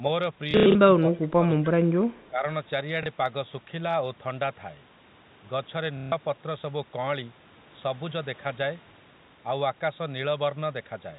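Short robotic stutters break up this telephone-band speech recording in two places: from 0.51 to 0.75 s, where about 150 ms of sound is lost in runs scattered across 240 ms (the longest run lasts 90 ms), and again from 5.97 to 6.12 s, with a small blip from 3.03 to 3.06 s. The stutters buzz at roughly 33 Hz. This is packet loss with the last packet repeated. The receiver fills each gap by replaying the most recent packet, and those copies do not line up with the pitch of the voice. The gap lengths fit 30 ms packets. From 0.99 to 1.48 s the voice sinks, falling by about 20 dB at its deepest. A milder dip of about 10 dB follows from 2.29 to 2.44 s. The likely cause is speech suppressed in double talk. With both parties talking at once, the echo canceller could not tell this talker apart from loudspeaker echo, so it turned everything down. Just before that second dip, from 2.16 to 2.28 s, a very faint delayed copy of the voice can be heard, trailing by 290 ms. 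That points to echo leak: a loudspeaker on one side fed sound back into its microphone, and the canceller did not fully remove it. The G.711 A-law coding adds at most a faint trace of its own and keeps everything within the 4 kHz telephone band.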